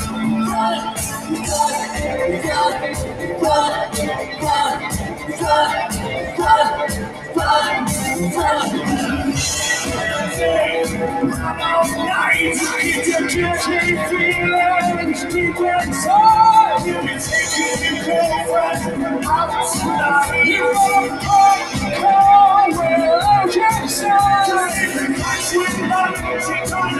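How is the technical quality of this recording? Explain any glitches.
The recording has clear processing faults. A constant gating effect runs through the whole clip, and there are several distinct dips where the sound is turned down.

Throughout the clip, the level pumps and sustained or fading parts thin out and sink, swinging by around 10 dB. This is a noise suppressor applied to music or sounds: a speech-oriented suppressor was left on. It treats steady tones, ambience and decays as noise and pulls them down, while attacks pass through.

Sound cut by the noise suppressor occurs at 0.76–0.94, 1.11–1.47, 2.85–3.25, 4.2–4.43, 5.05–5.41, 6.22–6.38, 7.05–7.36 and 15.14–15.34 s. Each dip lasts a few hundred milliseconds at most. The drops are about 7 to 8 dB, except about 5 dB at 15.14 s. At these points the suppressor judged the material to be noise and attenuated it more than its surroundings.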